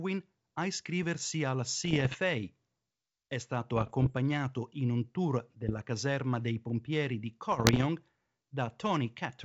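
Bit errors on an ADPCM link strike the speech four times: 1.85–2.19 s, 3.76–4.14 s, 5.69–5.82 s and 7.52–7.85 s, with roughly 0.7% of bits flipped in the first three and 1.0% in the last. Each corrupted code knocks the decoder's step size and predictor off track, so the error rings on for milliseconds rather than clicking once. Each stretch sounds like crackling pops and gritty bursts with brief jumps in level, over a G.722 wideband signal that fits 64 kbit/s.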